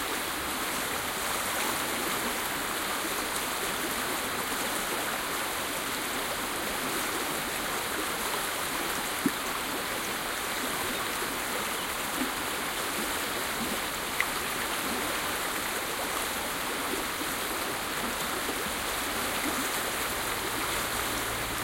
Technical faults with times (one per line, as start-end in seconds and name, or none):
none